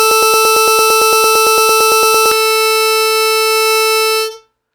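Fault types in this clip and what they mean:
Broken-record loop: from the very start until about 2.3 s the music is stuck on a 113 ms fragment that repeats back to back about 20 times. It sounds like the player or stream likely stalled and kept resending its last chunk, so whatever music belonged there is simply gone.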